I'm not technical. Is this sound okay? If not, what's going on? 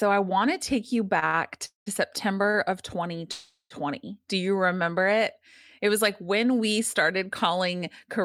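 No. Just after "want to take you", at 1.19 to 1.24 s and again at 1.26 to 1.35 s, the speech briefly hangs on one sound, and once more at 2.50 to 2.56 s. These are short stalls from a late packet: a piece of audio arrived late, so the last sound was stretched until it came. Nothing is lost; the speech just falls slightly behind.

Twice the speech stops outright: 1.65 to 1.88 s and, longer, 3.32 to 3.72 s, each with a buzz or hiss fading into near-silence. This is a call audio freeze, likely caused by a run of delayed audio, after which the speech resumes where it stopped.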